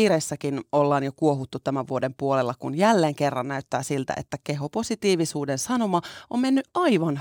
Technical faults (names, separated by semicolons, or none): none